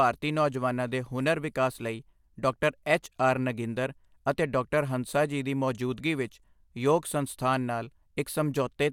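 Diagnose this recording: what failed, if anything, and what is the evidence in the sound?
Nothing stood out on listening to this speech recording that would point to a failure at any stage of the chain.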